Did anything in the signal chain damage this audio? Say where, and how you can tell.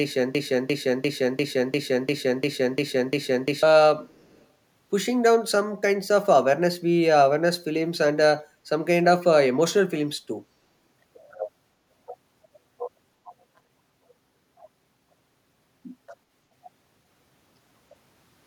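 Yes. A broken-record loop runs from the very start to 3.63 s. The same 0.35 s fragment plays back to back nine times, already repeating when the audio begins. The stream or playback buffer likely stalled and kept resending its last fragment, so the intended audio is lost.

An echo leak follows at 4.06 to 4.45 s, in call processing. A very faint copy of the speech trails the original by 0.35 s. A loudspeaker's sound likely reached a microphone, and the echo canceller failed to remove it entirely.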